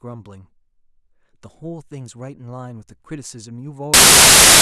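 A speech clip that, from 3.94 s through to its end at 4.62 s, collapses into loud, harsh broadband noise. This is samples built from the wrong bytes: for that final stretch the bytes of each sample are being assembled incorrectly, through a byte offset, swapped byte order or misread alignment, so the rapidly fluctuating low-order bits end up as the dominant part of every value.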